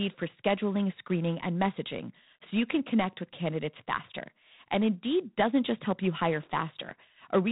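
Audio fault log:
throughout, G.726 ADPCM: the speech carries a harsh, rasping hiss that rises and falls with its level, plainly audible from start to end, and nothing above 4 kHz gets through. Coding each sample as a few bits of difference from a running prediction leaves coarse steps, and the roughness points to about 24 kbit/s. Unlike steady background noise, the hiss follows the speech rather than holding steady, and unlike plain band-limiting, the band edge comes with grit.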